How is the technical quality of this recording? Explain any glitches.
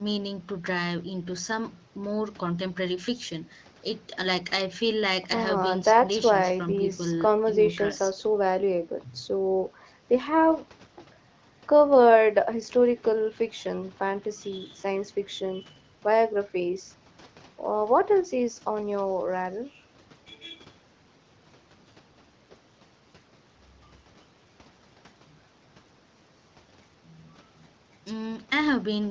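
Nothing stood out on listening to this speech recording; no glitches or other problems caught the ear.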